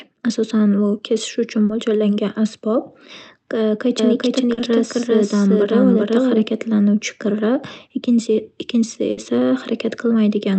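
Speech carried over a call path, with the top end stopping near 8 kHz as a call codec such as Opus would leave it, shows three kinds of fault. Short concealed packet loss appears at 1.65 to 1.71 s and again at 4.53 to 4.59 s. Each time about 40 ms of audio failed to arrive and the receiver extended the preceding sound to cover it before blending back, which is heard as a quick smear or wobble. These differ from a burst loss because the gap is too short for the sound to fade or hold. From 3.99 s to 6.47 s the speech plays twice, with a second copy at roughly the same level trailing about 0.4 s behind. This doubled audio track is likely from a second, slower capture path or misaligned copies in an edit. It is not acoustic echo or reverb, because the repeat carries the full frequency range with no decay or room colouring, and it starts and stops abruptly. A burst of packet loss hits at 9.11 to 9.19 s. 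Around 60 ms went missing in a row, and the concealment stretched the last sound while turning it down, giving a held buzz or fading hiss before the speech resumes further along. This is longer than the brief smears, and part of the sound is simply absent.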